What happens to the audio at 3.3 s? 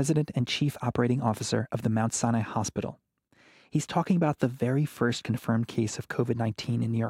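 Nothing goes wrong at 3.3 s; the speech carries on intact through that moment.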